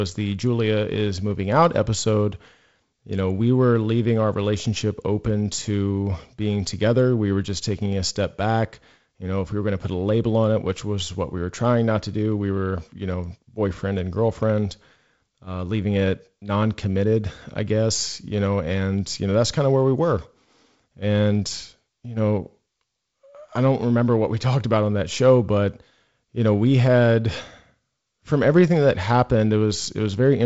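Speech over G.722 wideband coding with nothing above about 7.7 kHz and the light upper-band hiss and slightly noisier lower band that fit the 48 kbit/s mode, and no faults.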